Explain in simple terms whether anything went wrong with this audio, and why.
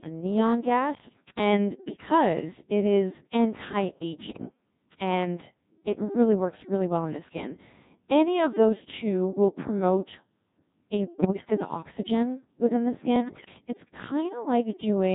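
The whole recording has gone through a Codec 2 vocoder, a very low-rate digital radio voice codec. It doesn't keep the actual sound wave. It sends only rough pitch, loudness and tone information and rebuilds the voice from that, so everything comes out heavily robotic and buzzy.

On top of that, there are two bursts of bit errors on digital voice radio, from about 11.20 to 11.50 s, just before "in oxygen within the", and from 13.16 to 13.54 s, right after "in oxygen within the". Corrupted data scrambles the rebuilt voice, so it briefly jumps in pitch and loudness and turns into warbly gibberish.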